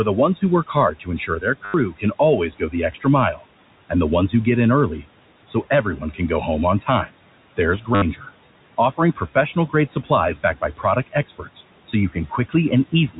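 Throughout the speech, noise suppressor artifacts are present. The background is pulled down by about 18 dB, which shows on a spectrogram as patchy, blinking noise between the syllables.

From 0.4 to 3.44 s, just after "the ones", speech is cut by the noise suppressor. The suppressor takes quiet parts of the speech for noise and lowers them by up to about 15 dB, over roughly 0.7 s in total. On the waveform these parts appear as collapsed, faint stretches.

Inside that span, from 1.65 to 1.74 s, packet loss with the last packet repeated replaces 90 ms of sound. This fits 10 ms packets looped, so it gives a robotic 100 Hz buzz. A spectrogram shows evenly spaced vertical stripes.

More suppressor cuts follow at 5.98 to 6.2 s, just before "go home on" (about 11 dB), and at 6.8 to 7.13 s, just after "go home on" (about 16 dB). There is another cut at 7.57 to 8.27 s (about 13 dB). During it, a second repeated-packet stutter from 7.95 to 8.02 replaces 70 ms with the same buzzy striping.

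The last cuts fall at 8.92 to 10.1 s (about 12 dB), 10.43 to 12.54 s (about 15 dB, roughly 0.4 s affected) and 12.92 to 13.2 s (about 14 dB). Each leaves word edges swallowed and visibly dimmed. The steady room noise, about 19 dB below the speech, lies beneath the suppressor's processing.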